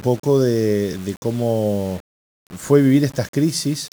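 From start to finish the speech carries a grainy, rasping distortion that rises and falls with the voice itself, the sound of low bit depth without dither. The signal has likely been rounded to about 6 bits, leaving the error only around 25 dB below the signal. Unlike steady hiss from dithering or background noise, this grit disappears in pauses and is harshest on soft syllables and decaying tails, which break up or sputter.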